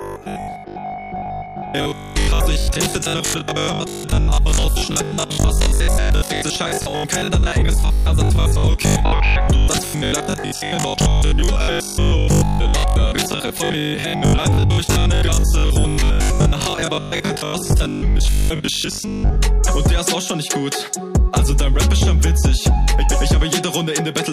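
From 0.02 to 19.46 s there's robotic sound from repeated short buffers: a rigid 50 Hz metallic buzz, likely from most of the audio being replaced by 20 ms repeats.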